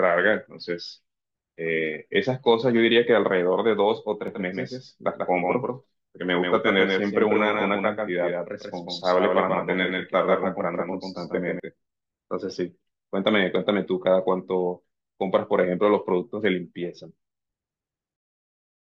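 From 4.28 s to 11.60 s a doubled audio track appears: a second full-band copy of the speech trails by roughly 150 ms at roughly 5 dB quieter, likely from a slower capture path mixed in. Unlike room echo, it has no decay and switches on and off abruptly.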